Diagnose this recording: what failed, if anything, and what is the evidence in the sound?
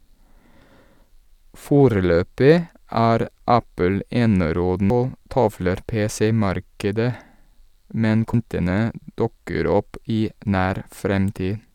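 The failure sits at the codec stage: damaged data in a compressed stream, heard as two brief disturbances in the speech at 4.90 s and 8.34 s. At each point the decoder hit corrupted bytes, misread or rejected the affected frame, and lost sync until it found the next valid frame header. Unlike a buffer dropout, which leaves a clean silent gap, or an analogue click, which is a single broadband impulse, these blips are produced by bad frame data.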